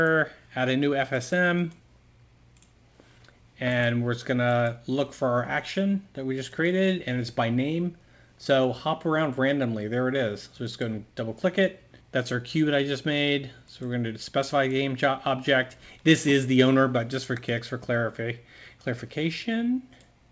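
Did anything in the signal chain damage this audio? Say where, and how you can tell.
No, nothing stood out on listening; the audio carries the expected band limit of a call path, with nothing above 8 kHz, which fits G.722 at 64 kbps.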